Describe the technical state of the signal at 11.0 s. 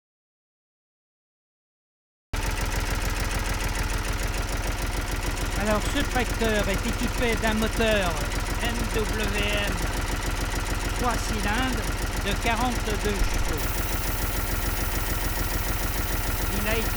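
At 11.0 s the signal is intact, with no audible fault at that moment.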